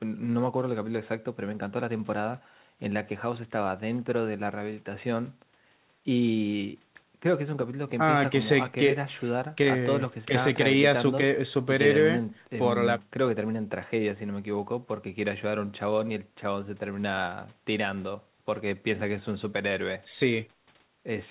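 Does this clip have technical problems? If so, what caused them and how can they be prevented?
No, no technical problems here.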